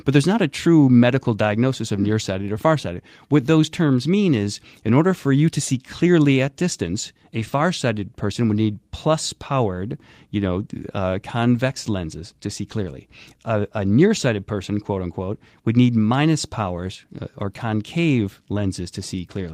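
Nothing in the speech stood out as a technical problem on listening.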